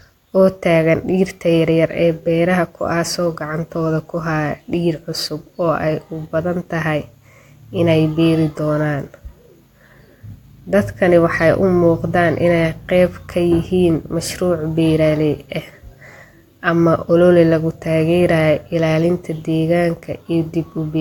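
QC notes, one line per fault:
Nothing stood out on listening to this recording.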